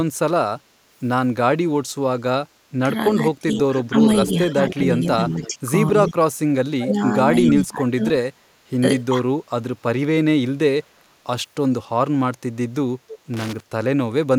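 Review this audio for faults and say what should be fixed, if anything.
The speech level drops and comes back in uneven pieces at three points. From 3.11 to 6.15 s it dips by up to about 15 dB, totalling around one and a half seconds. From 6.76 to 8.31 s the drop reaches about 25 dB and lasts roughly a second in total. From 9.09 to 9.25 s there is a brief dip of about 5 dB. This is likely speech suppressed in double talk: with both ends active, the echo canceller could not tell this talker from its loudspeaker echo and attenuated everything. Retuning the canceller's double-talk detector and easing its residual suppression would prevent it.

A delayed copy of the speech trails the original at three points. From 3.58 to 5.48 s it arrives 294 ms late at about 15 dB below the main speech. From 6.91 to 7.52 s it has the same 294 ms delay but is much stronger, only about 5 dB down. At 13.08 to 13.19 s a short scrap arrives 321 ms late, again about 15 dB down. 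This is likely echo leak: a far end on loudspeaker whose canceller let part of its microphone pickup return down the line. Using a headset at that end, or improving its acoustic echo cancellation, would stop it.

From 13.34 to 13.60 s there is an irregular burst of crackle and scratching. This is loose connector crackle. A worn or dirty contact in the signal path made and broke rapidly as it moved, chopping the audio and adding pops wherever DC was present on the line. Cleaning or replacing the connector and securing the cable so it cannot shift would prevent a repeat.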